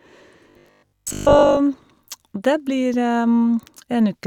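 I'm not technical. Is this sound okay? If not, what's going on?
No. From 0.51 to 1.59 s the speech turns into a robotic sound from repeated short buffers: a flat, metallic buzz at about 50 Hz that still loosely tracks the words. The likely cause is audio arriving too slowly, so the playback software keeps replaying the last tiny slice, about 20 ms long, for most of that stretch instead of the real sound. Those rapid repeats force the steady buzzing pitch and skip over the actual audio.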